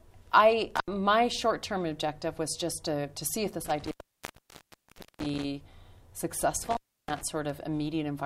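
At 0.76 s, 3.66 s and 6.62 s the audio suffers an intermittent contact, where a loose plug or cable briefly opens the signal path. The sound drops out for about 76 ms, then 1.29 s, then 316 ms, with scratchy crackle as the contact breaks and remakes and faint hiss in the gaps. Digital dropouts cut cleanly to silence, but here the ragged crackling edges and irregular gap lengths point to a physical connection.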